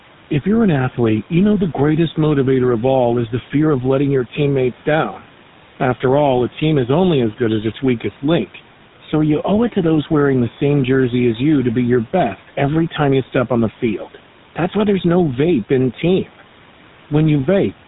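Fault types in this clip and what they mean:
noise suppressor artifacts: A frame-by-frame suppressor pulls steady background down by about 12 dB. The room noise sinks between phrases and rises back under the speech.
GSM full-rate codec: The vocal tract is modelled and driven by spaced pulses. Nothing passes above 3.8 kHz. The speech sounds plainly buzzy and gravelly throughout.
speech cut by the noise suppressor: Parts of the speech were mistaken for noise and turned down, by about 9 to 12 dB. They sound swallowed, including just after "there's no vape in".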